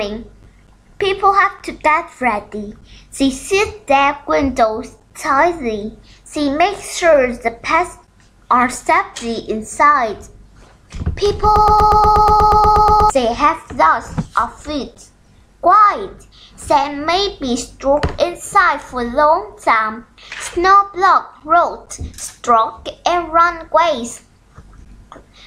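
From 11.56 to 13.10 s the audio falls into a broken-record loop: one 120 ms fragment repeats exactly, back to back, 13 times, and the material meant for that stretch never plays. The player likely stalled and kept resending its last fragment. Unlike an echo, nothing decays or overlaps.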